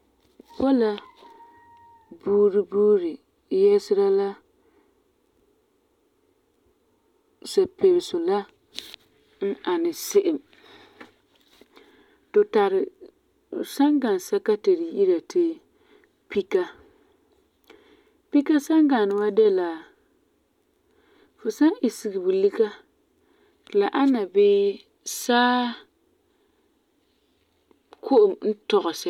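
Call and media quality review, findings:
No audible faults found in the speech clip; no symptoms to report against any component.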